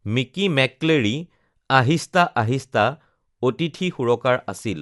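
Throughout the speech, codec damage is plainly audible. Nothing sounds above 11.5 kHz, so it is dull. Rough, fluttering noise clings to tones. The likely cause is Dolby Digital compression. Frequency lines left without bits get filled with noise, which fits a bitrate near 64 kbps.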